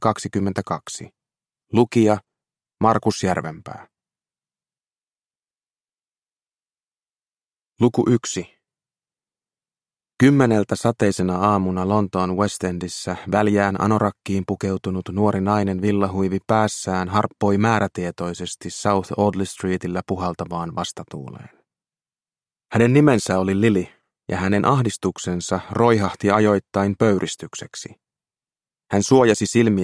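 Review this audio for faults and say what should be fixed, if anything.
No faults heard; nothing needs fixing.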